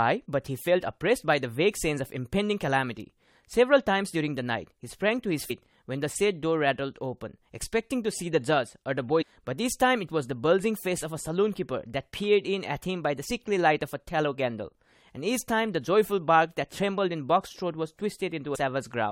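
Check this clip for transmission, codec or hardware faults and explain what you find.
Damaged data in the compressed stream occurs four times: 5.49 s, 9.21–9.23 s, 13.29 s and 18.54–18.56 s. Corrupted bytes make the decoder misread frames and lose sync, giving brief glitches in the speech.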